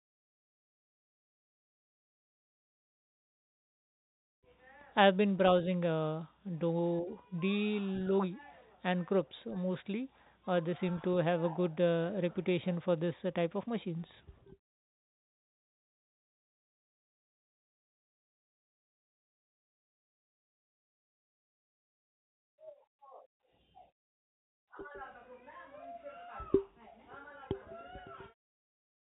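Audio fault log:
The speech carries the band limit of G.711 telephone coding, which fits mu-law at 64 kbps, with nothing above 3.8 kHz and at most a faint quantisation hiss that tracks the signal level, and no faults are present.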